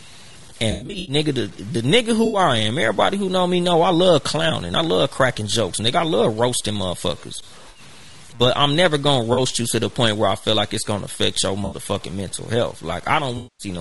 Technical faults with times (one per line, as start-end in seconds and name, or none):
0.00-13.81 low bit depth without dither
0.00-13.81 low-delay AAC compression
0.71-1.15 AAC frame loss with concealment
2.25-2.39 AAC frame loss with concealment
7.69-7.79 AAC frame loss with concealment
9.33-9.39 AAC frame loss with concealment
11.65-11.75 AAC frame loss with concealment
13.37-13.67 AAC frame loss with concealment